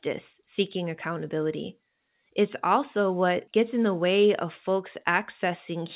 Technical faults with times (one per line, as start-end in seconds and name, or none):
none